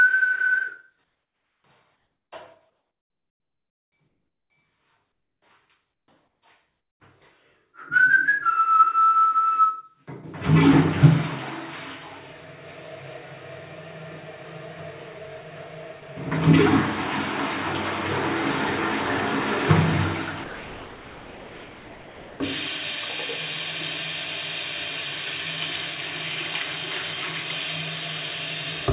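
Comfort noise in place of the background at 1.04–1.64 s, 1.96–2.32 s and 4.08–4.5 s in this recording of everyday sounds swaps the real ambience for a steady, featureless hiss, about 5, 2 and 3 dB quieter. The likely cause is discontinuous transmission filling pauses with synthetic noise. Sound dropped by the voice detector at 16.0 s and from 20.44 to 22.4 s replaces a brief 20 ms moment and then nearly two seconds of sound with that same flat noise, most likely because the detector mistook quiet sound for background and stopped sending until it triggered again. Across the clip, the G.711 mu-law call path leaves nothing above 4 kHz.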